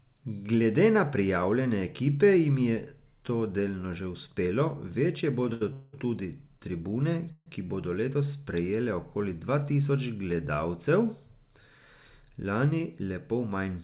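Speech over a narrowband call line, with nothing above 4 kHz, which fits a G.711 A-law path. Right after "delno že uspelo večje" there's a short stall from a late packet at 5.53 to 5.63 s. The receiver ran its jitter buffer dry and stretched the last sound for about 78 ms until the packet turned up, so nothing's lost, just a held sound. Then come two call audio freezes: 5.73 to 5.95 s, just before "tudi tribune ki bodo", and 7.32 to 7.48 s, between "tudi tribune" and "ki bodo letos sprejele". In each, the last sound hangs on as a fading buzz for 200 ms and 140 ms respectively, and the second one drops to silence for its final 40 ms. The speech then resumes exactly where it left off, likely because packets were held up in transit. From 11.78 to 13.10 s there's a jitter buffer speed-up. The receiver trimmed tiny pitch-period slices to burn off the extra buffered delay, about a tenth of a second in total, so the speech runs at 108% speed at the same pitch and sounds a bit rushed.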